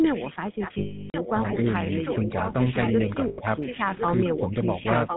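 The whole clip of speech carries the GSM full-rate codec's sound: a buzzy, gravelly roughness with nothing above 4 kHz. This grain comes from the codec rebuilding the voice from a coarse pulse excitation at 13 kbps. Unlike the brief faults below, it is steady and never comes and goes.

From 0.05 to 2.53 s a faint second copy of the speech trails the original by about 1.06 s, some 10 dB down. This echo leak is likely a loudspeaker on one side whose echo canceller let its pickup through. The long, fixed delay marks it as an echo, not a smear or a ring. It returns from 5.06 s to the end, louder at about 5 dB below the speech.

Lost GSM frames cut in from 0.78 to 1.15 s. For about 0.36 s, the decoder repeats the last good frame with falling level, so the sound freezes into a metallic ring that fades. Unlike the echo, this repeated material is a held drone, not a delayed copy.

At 2.23 to 2.29 s the speech dips by about 5 dB for roughly 70 ms. 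This is speech suppressed in double talk, likely the echo canceller turning the talker down while the echo overlapped. It sounds like a brief level duck, with no ring.

A second loss of GSM frames from 3.28 to 3.39 s, about 0.1 s long, gives a short metallic buzz.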